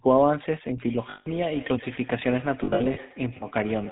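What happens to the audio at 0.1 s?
At 0.1 s you're already hearing the GSM full-rate codec, and it runs through the whole clip, not just that moment. The codec rebuilds the speech from a vocal-tract filter excited by a sparse, regularly spaced pulse train, and it keeps nothing above 4 kHz. That gives the speech its buzzy, gravelly grain and a dull, band-limited top end. The damage is plainly audible, which fits the old 13 kbps full-rate mode.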